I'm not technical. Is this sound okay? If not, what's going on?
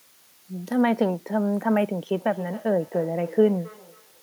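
No. All the way through, there is a steady, even hiss sitting under the speech, like soft static that never changes. This is low bit depth with dither. The sound has been stored with very few steps between quiet and loud, which fits about 8 bits. Rounding everything to such coarse steps would normally make it gritty, so a little random noise was mixed in first. That trades the grit for this constant hiss.

From about 2.17 s to the end, each bit of speech comes back again roughly a third of a second later, quieter and thinner, with a ringing, hollow quality. This is a feedback echo between two devices. Two phones or computers in the same room were on one call, and one played out what the other's microphone had picked up. That microphone then heard it again and sent it round once more. Each device's echo removal only cleans up its own playback, so these repeats get through.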